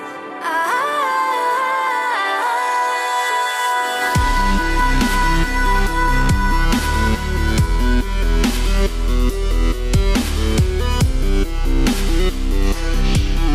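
No technical faults can be heard anywhere in the recording, which carries through its whole duration without any dropout, distortion, clipping or other disturbance to the signal.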